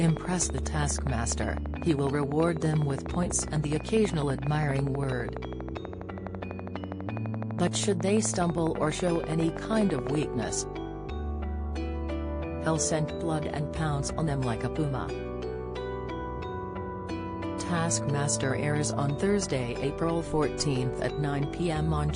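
A train of clicks runs from 0.08 to 10.24 s: regular ticks at 12.1 per second, peaking about 10 dB above the audio, likely from interference or a faulty connection. They show as evenly spaced vertical lines on a spectrogram.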